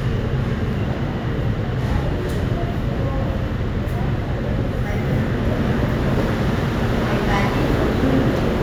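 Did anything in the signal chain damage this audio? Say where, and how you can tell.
No, nothing stood out on listening that points to damage at any stage of the chain.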